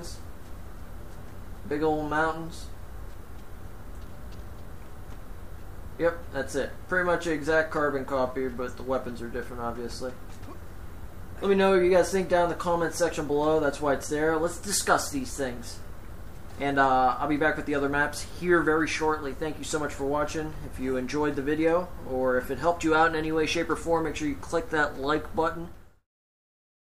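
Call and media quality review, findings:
No faults found.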